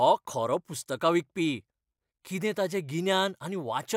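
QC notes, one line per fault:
No faults heard.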